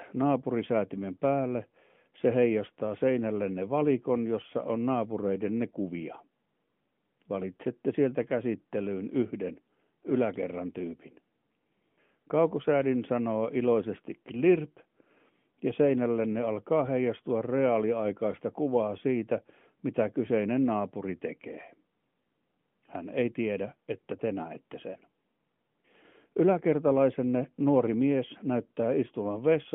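The speech carries no technical fault; its telephone band of about 150 Hz to 3.4 kHz and its light coding texture are what a normally working AMR narrowband mobile codec path produces, which fits the codec's 12.2 kbps mode.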